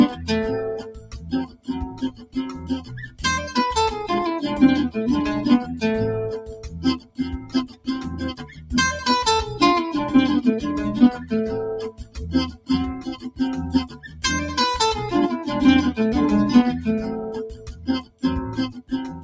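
A noise suppressor built for speech was left running on this sound, which is a noise suppressor applied to music or sounds. It treats sustained and decaying material as noise, so the level pumps by roughly 15 dB. On a spectrogram, held energy and tails fade or break up while onsets stay bright. The sound is cut by the noise suppressor in six places: 0.1–3.22 s, 5.68–5.83 s, 6.45–8.72 s, 11.16–11.32 s, 11.91–14.24 s and 17.51 s to the end. The drops reach about 14 dB in the long stretches, about 7 dB at 5.7 s and about 11 dB at 11.2 s. The waveform shows these as sagging envelope sections and prematurely truncated decays. The call's microphone processing leaves nothing above 8 kHz, a band edge that appears as a flat ceiling on the spectrogram.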